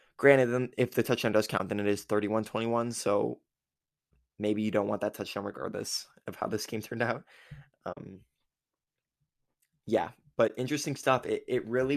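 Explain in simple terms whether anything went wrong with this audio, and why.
The speech drops out briefly three times. This is AAC frame loss with muting. Small chunks of the coded stream went missing, and the decoder filled each gap with silence. The sound fades down and back up, so each hole has soft edges. The gaps fall at 1.58 to 1.60 s, 7.93 to 7.97 s, and 10.48 to 10.50 s. The middle one is longer, about 40 ms against about 20 ms. That fits a few short frames lost, likely from low-delay AAC as used in video calls.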